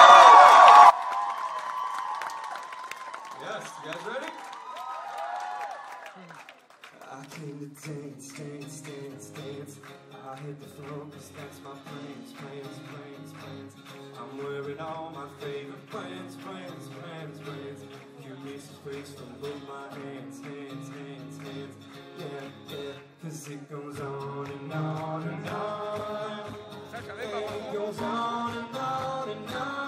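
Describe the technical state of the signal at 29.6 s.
At 29.6 s you're still inside a long stretch of one channel inverted, running from 0.90 s right through to the end. The level is down by about 18 dB and the sound is faint, with the centred material largely gone. That's the classic signature of a polarity flip on one side, likely, so when left and right are summed to mono their shared content cancels and only the difference survives.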